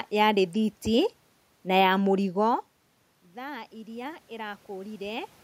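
At 0.53 s a sharp snap cuts across the speech: an electrical switching spike, most likely a nearby switch, motor or static discharge arcing briefly and being picked up by the audio line. It lasts only an instant and sits on top of the voice rather than replacing it. On a waveform it shows as a thin vertical spike, and on a spectrogram as a narrow bright line running from the low frequencies up through the high kHz range.

Around 2 s the voice drops as the talker moves back from the microphone. From 3.31 s to 5.38 s automatic gain rising follows: with the input level down by about 18 dB, the gain control responds by gradually raising its gain, about 6 dB over those two seconds. Voice and the room's background noise swell together, so the room noise rises along with the speech. On a waveform the envelope, including the quiet gaps, widens slowly over that span; on a spectrogram the whole picture, noise floor included, brightens evenly toward the end.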